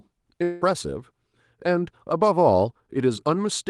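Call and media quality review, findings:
Long network dropout, 0.43 to 0.63 s: roughly 0.2 s of speech just missing, papered over by a buzzy, fading smear of the preceding sound, with no actual silence before audio picks up again past the gap. Likely packet loss upstream. The jitter buffer ran dry and the decoder's concealment extrapolated across it. The Opus call path is audible too: coding grain, top end stopping around 12 kHz, which fits a roughly 32 kbps setting.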